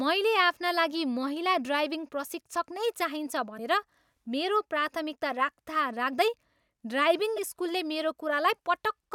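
At 3.57 s, after "ड्राइभिङ प्रशिक्षक नै चाहिन्छ", and at 7.36 s, a 28 ms glitch makes the audio jump ahead, likely from a broken MP3 bit reservoir.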